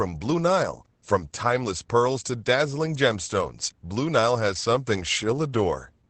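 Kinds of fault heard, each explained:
Opus voice compression: The speech runs through a linear-prediction voice coder for the whole clip. It models the vocal tract and codes the excitation only coarsely. The band stops at about 8.6 kHz, so the top end is gone and the speech sounds dull. The damage is plainly audible. Voices come out slightly hoarse and a little robotic. All of this fits a wideband SILK setting at a low bitrate, near 12 kbps.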